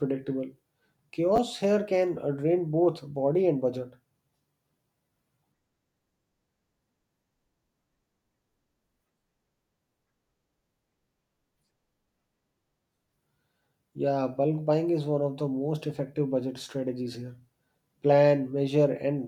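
At 1.36 to 1.38 s, just before "here can uh drain", the speech gives a brief jumbled stutter. These are chunks out of order: one 10 ms chunk played a chunk late, swapping places with its neighbour and leaving three hard joins.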